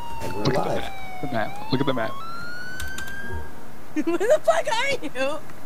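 From 2.20 s to the end, there's a section at the wrong speed: the audio suddenly runs 1.17 times too fast, so everything sounds hurried and jumps up by roughly three semitones. Speed and pitch shift together, which points to the likely cause being playback against the wrong clock.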